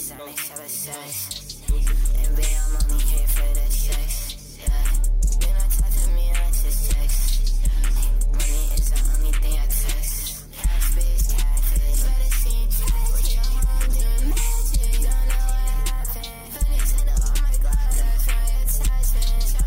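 No technical faults can be heard at any point in the clip.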